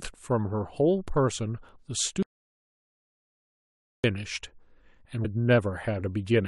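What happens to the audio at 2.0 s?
Just before 2.0 s, at about 1.96 s, the speech is hit by damaged data in a compressed stream. The event is very brief, well under 20 ms. Some of the coded bytes at that point are wrong. The decoder cannot read those frames properly, so it loses its place in the stream. It then hunts for the next valid frame header. What you hear is a short chirp or blip cutting into the speech.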